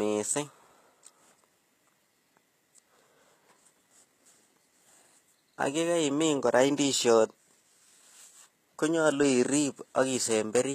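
Throughout, the speech likely passed through HE-AAC compression at a low bitrate, around 20 kbps. The treble is rebuilt from copied lower bands, giving plainly audible grit on s sounds and nothing above 14.9 kHz.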